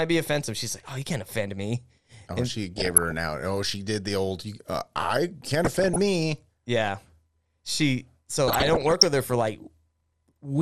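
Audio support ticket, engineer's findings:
MP2 compression, whole clip. Dull, granular speech with gurgling; upper sub-bands dropping in and out. Likely MPEG Layer II starved of bits, consistent with a rate around 80 kbps, so high bands are switched off and the rest are coarsely quantised.

DAB burbling at 2.78–3.12 s, 5.65–5.98 s and 8.48–9.06 s. Short noise blips in single sub-bands over the speech. Bit errors, under 1%, are passing the error correction and corrupting sub-band samples and scale factors, so single bands jump in level for up to a frame.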